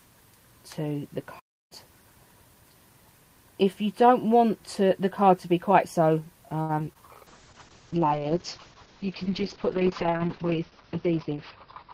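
The audio opens with a playback stall from 1.39 to 1.72 s, most likely the player running short of data or its thread being blocked, so the sound cuts out for about 313 ms before resuming. From 6.61 to 6.97 s, repeated packet loss leaves four holes, the longest 76 ms, patched by stretching the preceding sound; about a third of that span is filled this way, giving a choppy, robotic texture with pieces missing. A call bitrate drop starts at 7.28 s and lasts to the end. The coarser, band-limited sound fits the encoder falling from about 32 kbps to roughly 7 kbps, with the top end pulled down from 20 kHz to 6 kHz, leaving it muffled and rough. Inside that stretch, from 7.95 to 8.26 s, a jitter buffer slow-down repeats short pitch periods to rebuild its reserve, adding 52 ms and running the audio at 86% speed with drawn-out sound.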